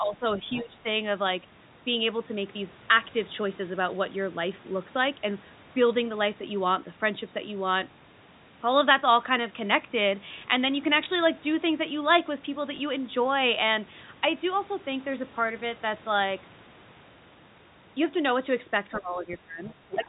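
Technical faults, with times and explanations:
0.00–0.25 s, 0.61–0.85 s and 18.88–20.08 s, speech suppressed in double talk: the talker dips by roughly 15 to 20 dB and goes patchy, likely because the echo canceller heard both sides at once and turned everything down rather than risk passing echo.
0.54–0.62 s, other side's voice leaking through: a scrap of a second voice, around 20 dB below the talker, slips in. That's likely the far end playing from the loudspeaker, with the echo canceller leaving part of it in the microphone signal.
11.04–11.06 s and 12.76–12.78 s, packet loss with last packet repeated: each time, a single 20 ms packet went missing and the previous one was played again, so you get a small blip at each.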